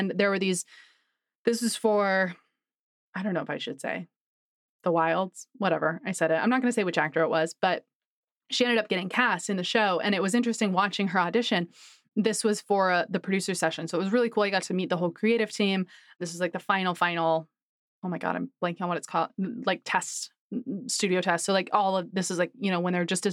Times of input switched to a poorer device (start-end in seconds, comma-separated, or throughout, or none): none